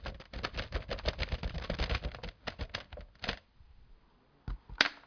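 A recording of everyday sounds carrying aliasing from start to finish. The audio points to a drop from 48 kHz to about 11 kHz with no anti-alias filter, so anything above the 5.5 kHz fold point mirrors back down as harsh, unrelated tones, only a few decibels below the real content. On a spectrogram, energy runs right up to the 5.5 kHz ceiling, with mirrored traces sloping the wrong way beneath it.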